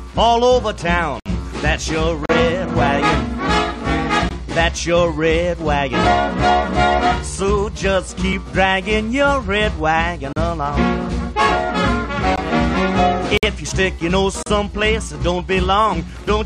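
At 1.20 to 1.26 s, 2.26 to 2.29 s, 4.29 s, 8.33 s, 10.33 to 10.36 s, 12.36 s, 13.38 to 13.43 s and 14.43 to 14.46 s, a gap between stream segments opens a hard-edged hole of silence, from about 4 to 61 ms. Successive one-second segments are timestamped slightly apart, so the player pads with silence. Unlike a dropout, nothing is missing: the sound resumes exactly where it stopped, on a one-second grid.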